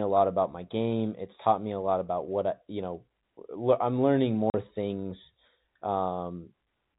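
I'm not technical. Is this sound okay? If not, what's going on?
No. At 4.5 seconds, just after "I'm learning", the speech briefly drops out for 40 ms: packet loss filled with silence, where missing chunks were replaced by nothing.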